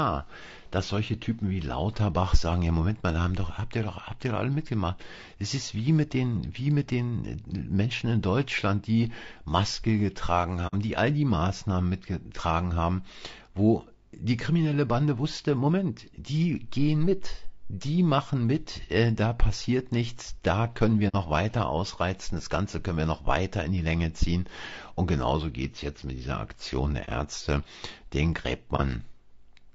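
Throughout, the speech was likely coded with low-delay AAC at a low bitrate, around 32 kbps. The short frames resolve harmonics poorly, leaving the voice plainly rough and grainy. AAC frame loss with muting follows at 10.67–10.74 s and 21.08–21.15 s, each fitting two lost frames, and at 27.05 s and 28.76 s, each fitting one. The decoder zeroed the missing spectrum, so the sound fades into brief, soft-edged holes.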